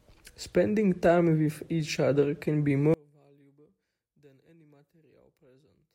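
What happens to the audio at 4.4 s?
At 4.4 s the speech has collapsed to a faint trace, about 33 dB down, from 2.94 s after "each other can be" to the end. This is likely one channel inverted, so the matching left and right content cancels when summed to mono.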